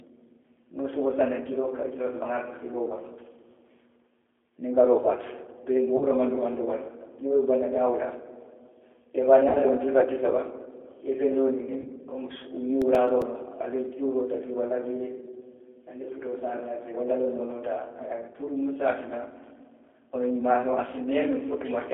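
A narrow, slightly rough and synthetic quality runs through the whole speech clip, with nothing below about 300 Hz or above 3.5 kHz. That is the G.729 codec, whose sound fits the 8 kbit/s G.729A variant. Rather than storing the waveform, it rebuilds each 10 ms frame from a vocal tract filter, a pitch predictor and a handful of pulses. The result stays intelligible but audibly coarse and artificial.

At 5.97 to 6.06 s, 9.49 to 9.58 s and 11.81 to 11.88 s, the speech briefly smears into a buzzy tone or coloured noise that fades, and stays weak for a moment afterwards. This is VoIP packet loss concealed by the speech codec. The gaps were about 40, 60 and 40 ms, which fits two, three and two 20 ms packets. The decoder filled them by extrapolating its last pitch and filter at falling gain. Because each frame builds on the last, the recovery lags briefly once packets resume.

From 12.82 to 13.35 s, five regular ticks of uneven strength are heard, the longest lasting about 4 ms. 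These are CD scratch ticks. A blemish on the disc wiped out more data on each revolution than error correction could rebuild, so the player patched or muted those few milliseconds each time round.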